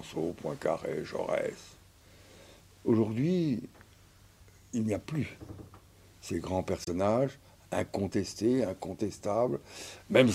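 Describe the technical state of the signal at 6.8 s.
At 6.84 s the sound cuts to silence and returns at 6.88 s, resuming as though it had played on through the gap. This is likely a Bluetooth dropout: a late packet was discarded, which fits a single lost frame of about 21 ms.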